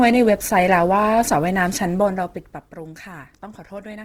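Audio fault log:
Throughout, Opus compression: the speech sounds rough and grainy, with tonal parts turned noisy where the encoder ran short of bits and filled bands with folded or noise-like content. Full bandwidth remains up to about 20.2 kHz. The damage plainly fits a likely 16 kbps music-mode encode.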